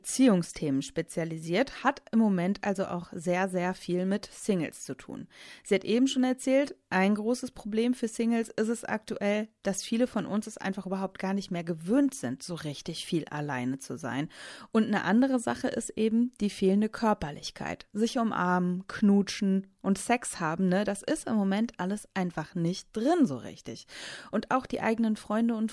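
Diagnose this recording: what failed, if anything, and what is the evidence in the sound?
Nothing in the speech stood out as a fault on listening.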